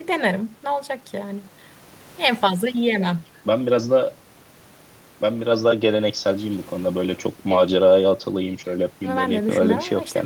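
Throughout the speech there is a faint unevenness of pace, as if the rhythm is being nudged forward in small, irregular steps. This comes from clock drift between sender and receiver: the sending clock runs around 4 percent fast, so audio arrives faster than it is played out and the receiver's buffer keeps filling.

From 0.05 s to 9.41 s, slight hiccups recur at uneven intervals, each a tiny skip that makes the speech feel a little rushed, close to 104 percent of its natural speed. These are repeated timing corrections, with the receiver cutting short pieces over and over to keep the overfull buffer in step with the faster sender.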